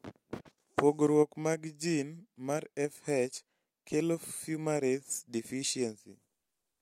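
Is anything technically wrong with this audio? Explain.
No, nothing technically wrong turns up anywhere in this speech clip.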